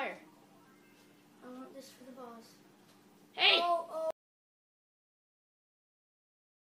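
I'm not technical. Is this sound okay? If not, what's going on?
No. At 4.1 s the sound cuts out completely and stays silent to the end: an audio dropout to silence, likely from the input device losing its connection.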